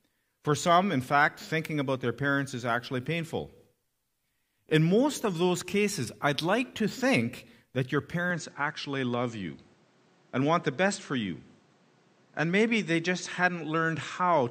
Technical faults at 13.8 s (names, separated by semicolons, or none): input switched to a poorer device